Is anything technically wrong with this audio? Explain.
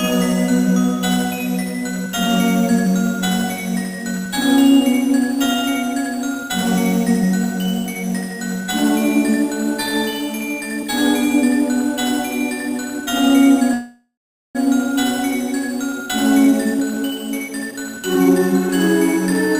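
Yes. From 13.73 to 14.57 s the sound stops moving forward: the last moment is stretched into a fading buzz that ends in about 0.43 s of silence, then resumes where it stopped. This is likely a call audio freeze, where delayed packets emptied the jitter buffer. On a spectrogram it appears as smeared horizontal bands that fade to a blank gap.

Two jitter buffer speed-ups follow, at 16.45 to 17.03 s (122% speed, about 0.15 s removed) and at 17.48 to 18.69 s (140% speed, roughly half a second removed). The receiver cut out short pitch-period pieces to reduce its backlog, so the sound hurries at unchanged pitch. The waveform looks compressed in time, with harmonics unshifted.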